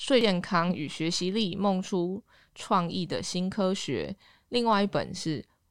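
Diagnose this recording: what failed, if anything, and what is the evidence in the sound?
Damaged data in a compressed stream at 0.21 s, in the codec and storage stage. A single brief blip breaks into the speech at that moment. Part of the compressed data there is corrupted: bytes lost, zeroed or overwritten. The decoder either misreads those frames or rejects them, loses frame sync, and scans forward for the next valid frame header. That garbled output during resynchronisation is the momentary disruption, after which decoding resumes.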